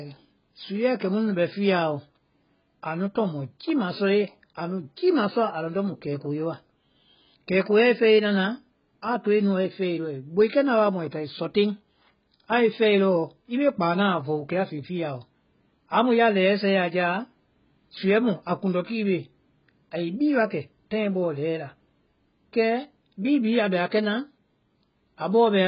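The whole clip sounds dull and smeared, with nothing above about 5.1 kHz and a warbly, fizzy edge on sibilants. That's likely AAC compression at a very low rate, something like 12 kbps, where the encoder drops the top end and starves the remaining bands.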